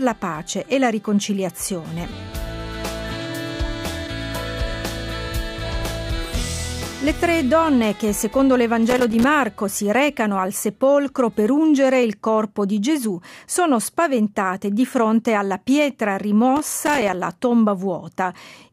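Irregular bursts of crackle and scratching break into the sound from 8.89 to 9.24 s and again from 16.56 to 17.15 s. This is loose connector crackle: a worn or dirty contact making and breaking as it shifts, chopping the signal.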